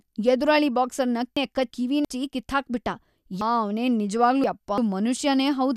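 Chunks out of order at 1.37–2.05 s and 3.41–4.78 s: 0.34 s blocks play one, then three, positions late, so the speech jumbles briefly.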